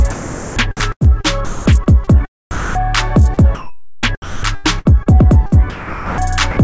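From 0.00 to 2.1 s and again from 2.51 to 6.18 s the sound is chopped by the voice detector, likely the sender's VAD repeatedly cutting quiet bits and filling about 0.87 s, then 1.67 s, with comfort noise. Then at 6.51 to 6.57 s a 60 ms stretch of sound is dropped by the voice detector, likely because it mistook that stretch for background, so steady comfort noise briefly replaces it. Everything sits in a band with nothing above 8 kHz, which fits a G.722 call codec.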